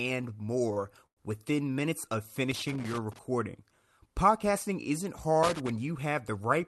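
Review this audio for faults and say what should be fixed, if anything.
A short stall from a late packet occurs at 0.73 to 0.79 s. A packet arrived late and the jitter buffer ran dry. The receiver held the last sound for about 29 ms until the packet came. Playback then resumed from the same point. Nothing is lost, but the sound drags briefly, with a faint buzz or dip. Keeping a little more jitter-buffer headroom on the receiving side would absorb delays of this size.

A call audio freeze follows at 1.06 to 1.20 s. The sound is held and then fades, leaving about 90 ms of silence inside a 103 ms fill. Afterwards the audio picks up where it stopped, so a gap has been inserted and nothing is missing. The likely cause is packets held up in transit while the jitter buffer emptied. A steadier network path, or a buffer that adapts sooner to rising delay, would prevent it.

Loose connector crackle appears from 2.51 to 3.19 s, starting just after "minutes of", and again from 5.43 to 5.70 s. 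Each burst is an irregular scratching crackle. A worn or dirty contact is making and breaking rapidly as it moves. That chops the signal on and off, and any DC on the line turns each break into a pop. The crackle rides on top of the call codec's own band limit near 12 kHz, which fits Opus at around 40 kbps. Cleaning or replacing the connector and securing the cable would stop it.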